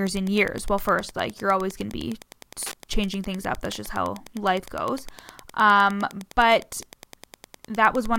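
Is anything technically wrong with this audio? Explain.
Yes. Wi-Fi interference runs through the whole speech clip: a nearby radio's beacon, every 102.4 ms, is rectified by the audio circuit, giving steady ticks about ten times a second, about 25 dB below the speech. Mobile-phone interference would instead sound like a rhythmic buzzing chatter.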